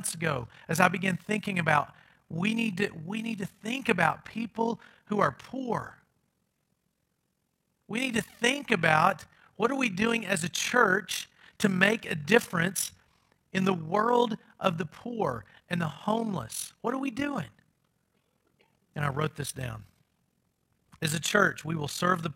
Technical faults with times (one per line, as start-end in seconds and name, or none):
0.00-22.36 overlap-add ripple